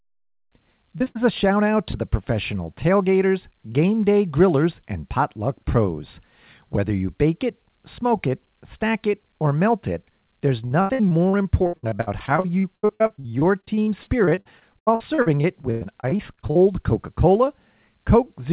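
Right at the start there's short concealed packet loss at 0.98 to 1.02 s and again at 1.04 to 1.08 s. Each time about 20 ms never arrived, and the receiver papered over it by stretching the last bit of sound, so you hear a quick smear or wobble. That runs straight into a burst of packet loss from 1.08 to 1.17 s, about 80 ms gone, heard as the last sound held and fading before the audio picks up further along. Another short concealed loss lands at 1.91 to 1.96 s, a similar brief wobble. Then from 10.66 to 16.57 s there's repeated packet loss, with roughly 50 dropouts, the longest near 99 ms, and about 29% of that stretch patched over. That gives it the choppy, robotic character. Throughout, the sound stops at 4 kHz, which fits a narrowband telephone codec on the call path.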